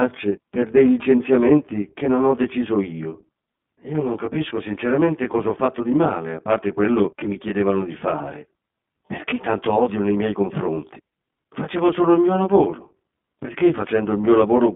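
It's a speech recording with a rough, slightly doubled quality running all the way through. That's channel delay producing comb filtering. One channel sits roughly 20 ms behind the other, and when the two are folded to mono, the shared content cancels at evenly spaced frequencies. The first notch lands somewhere around 30 Hz, and the notches repeat up the spectrum at twice that spacing. With a delay that long, the result is the rough, slightly doubled quality rather than a dull one. On top of that, the whole thing has plainly audible iLBC codec damage. The band is squeezed to about 150 Hz to 3.5 kHz, so there's no air or sibilance up top, and the voice has that slightly rough, synthetic edge you get from coding each 20 ms frame's excitation on its own. It fits the 15.2 kbps mode. There are also two spots of lost iLBC frames. The first runs from 5.32 to 5.35 s, right after "non capisco sinceramente" and before "ho fatto di male". 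The second is a brief one at 14.23 s. Each gap sounds like a short held, buzzy vowel where the decoder repeated the last pitch cycle with some noise mixed in, which fits a single lost 20 ms frame. Since iLBC frames don't depend on their predecessors, the voice snaps straight back afterwards.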